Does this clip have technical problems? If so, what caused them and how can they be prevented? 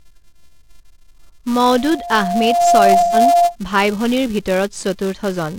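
Yes. A filter restarted on every block produces a steady 345 Hz buzz throughout, which fits 128-sample blocks. Unlike mains hum, it tracks the speech level. Carrying filter state across blocks prevents it.

Loudspeaker feedback squeal appears from 1.65 to 3.56 s as a 696 Hz tone that swells over about a second to roughly 5 dB above the speech. Its self-building growth distinguishes it from a steady interfering tone. Lowering gain or separating microphone and speaker prevents it.

AAC frame loss with concealment causes a 128 ms smeared, phasey patch from 2.99 to 3.16 s. This is a smear rather than a hard dropout, because the decoder filled in the lost frames. Error-resilient transport or retransmission prevents it.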